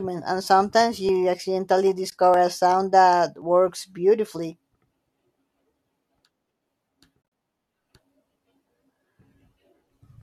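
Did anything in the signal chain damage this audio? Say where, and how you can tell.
Yes. At the driver or buffer stage, samples were likely overwritten before the program collected them, which is a dropped buffer (overrun). The sound jumps ahead at 1.09 s after "and sometimes" and at 3.42 s after "a sound that", each losing about 15 ms. A shorter skip of a few milliseconds at 2.34 s falls just before "a sound that".

In the codec and network path, AAC frame loss with muting zeroed the spectrum of the lost frames in the decoder. At 2.10 to 2.12 s a 20 ms hole fades out and back in softly, which fits two lost frames. From 7.22 to 7.32 s, 80 ms is lost in pieces across 100 ms, the longest gap about 40 ms, all beneath the light graininess of what is likely low-delay AAC encoding.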